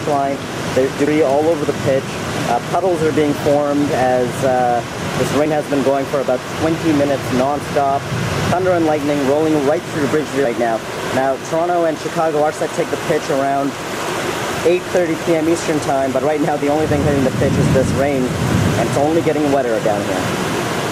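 You'll hear compressed frames skipped three times in this audio, at 1.07 s, 5.46 s and 18.83 s: it jumps ahead by roughly 150, 70 and 30 ms, about four, two and one 32 ms frames lost.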